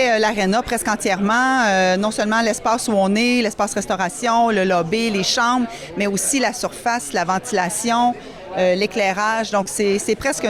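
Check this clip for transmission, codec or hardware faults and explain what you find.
One transmission fault appears near the end: a short concealed packet loss from 9.63 to 9.67 s. About 20 ms of audio failed to arrive in time, and the receiver filled that span by extending the sound that came just before it, then crossfaded back into the real signal. The result is a brief smear or wobble rather than a gap. An unconcealed dropout would leave a hard silence or a click, but here the hole is papered over with continuation.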